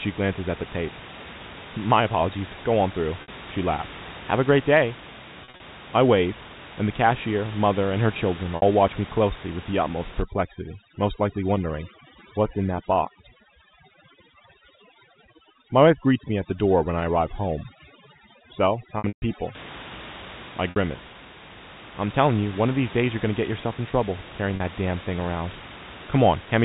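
Packet loss with pitch repetition hits at 3.22, 5.44 and 8.56 s. The receiver loops the last pitch period, so each gap sounds briefly held and buzzy. From 10.2 to 19.5 s, overdone noise removal squashes the bands near the noise floor, leaving twinkly specks in the background. Inside that stretch, at 18.98 s, there's a longer dropout with a run of about 140 ms that fades toward silence before the voice cross-fades back. Two more short buzzy patches of the same packet loss come at 20.70 and 24.56 s.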